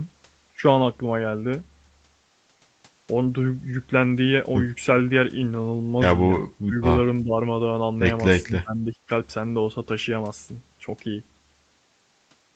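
A speech recording whose level dips sharply at 6.42 to 6.75 s, 7.23 to 7.35 s and 8.43 to 9.09 s, by roughly 25, 15 and 20 dB. This is likely speech suppressed in double talk: the echo canceller could not separate the near-end talker from the overlapping far-end echo and attenuated the near-end talker.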